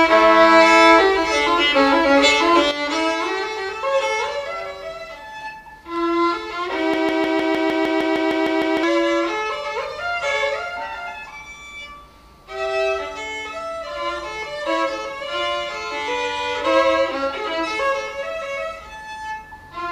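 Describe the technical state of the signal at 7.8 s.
The signal at 7.8 s sits inside a broken-record loop that runs from 6.94 to 8.83 s. A fragment of about 0.15 s repeats exactly, back to back, twelve times, giving a rapid stutter in place of the audio that should have played. The likely cause is a stalled player or stream resending its last buffered piece. A waveform shows one identical segment tiled end to end. A spectrogram shows the same block copied at a regular 0.15 s period.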